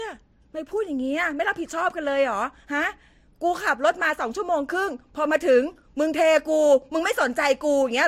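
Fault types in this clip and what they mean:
Transcoding between lossy codecs: throughout, nothing above 16.1 kHz and stacked compression artefacts, likely a Vorbis encode re-encoded to MP3, both fitting roughly 60 kbit/s.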